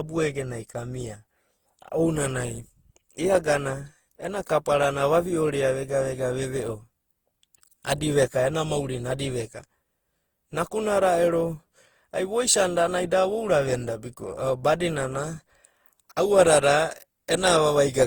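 From start to finish the speech carries generation loss: a swirly, hollow smear with softened consonant attacks, worse than a single lossy encode at this quality would give. The likely cause is repeated Opus encoding, around seven passes at a rate that fits 48 kbit/s, each requantising on a shifted frame grid. On a spectrogram, content reaches up to about 20.1 kHz but is speckled with noisy patches. In the waveform, transients look rounded and blurred.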